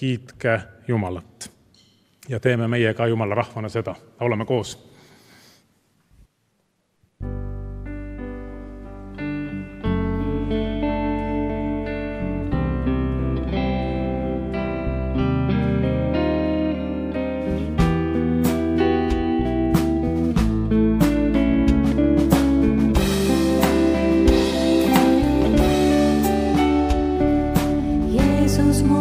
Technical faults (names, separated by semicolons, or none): none